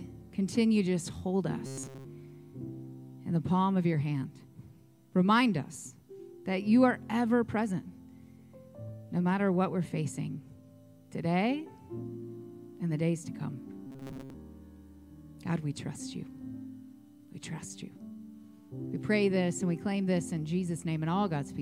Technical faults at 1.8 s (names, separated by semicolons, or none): robotic sound from repeated short buffers